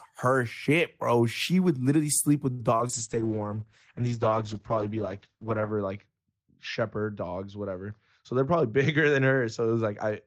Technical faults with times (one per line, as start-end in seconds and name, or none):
2.51-2.61 short stall from a late packet
2.77-2.91 short concealed packet loss
2.95-10.27 call bitrate drop
7.91-8.73 jitter buffer speed-up